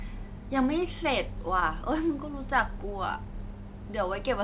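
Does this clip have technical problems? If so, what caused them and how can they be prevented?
Yes, there's one short concealed packet loss, from 1.60 to 1.64 s. About 20 ms of the call audio arrived too late or not at all, and the receiver patched roughly 14 ms of it by stretching the preceding sound forward before blending back into the real signal. You hear it as a quick smear or wobble in the speech. The call path is narrowband, with nothing above 4 kHz, consistent with G.711 mu-law. A wired connection, or a deeper jitter buffer on a congested network, would prevent it.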